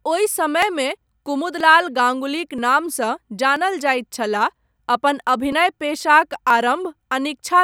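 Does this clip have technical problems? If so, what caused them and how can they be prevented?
Yes. This speech has short skips at 0.62, 1.60, 2.58, 3.56, 4.54, 5.52 and 6.50 s, one right before "गाङ्गुलीक नामसँ" and another right after "गाङ्गुलीक नामसँ". Each drops roughly 20 ms and splices the two sides together with no gap, so it sounds like a tiny jump. The steady spacing of just under a second points to audio missing between chunks, likely from a recorder or processor losing a sliver each time it closes one 1.0 s chunk and opens the next. To prevent it, use overlapping or double-buffered chunk handling so the next chunk is already capturing before the current one is finalised.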